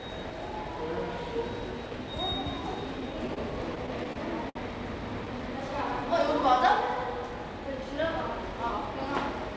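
From 3.00 to 4.57 s, repeated stalls (stutter) occur as packets arrive late and the jitter buffer runs dry ten times. Each gap, the longest about 59 ms, is bridged by continuing the last sound, 174 ms in all, so nothing is lost but the audio hitches and drags.

From 5.42 to 6.06 s, a jitter buffer slow-down builds reserve by repeating single pitch periods, stretching that stretch by 43 ms. The sound plays at 94% speed with unchanged pitch, drawn out, over a band that stops at 8 kHz, as G.722 would.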